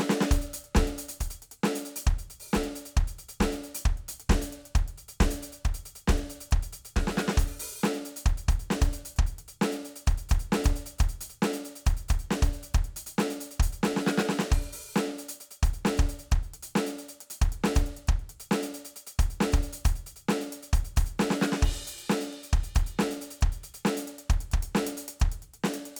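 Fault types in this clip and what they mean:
Dropped samples: at 15.11 s the music carries a single sharp click, most likely from a fraction of a millisecond of samples going missing from the stream. The waveform jumps abruptly from one value to a later one instead of continuing smoothly, and that step sprays energy across all frequencies at once, so the spectrogram shows one thin vertical line spanning the whole range. The gap is far too brief to remove any audible musical content.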